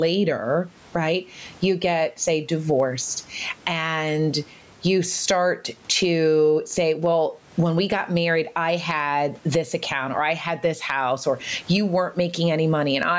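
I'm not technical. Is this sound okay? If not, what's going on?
No, there's gain pumping all the way through. The level gets shoved down by a big margin each time someone speaks. That's likely a level set far too high, with an automatic limiter constantly yanking it back.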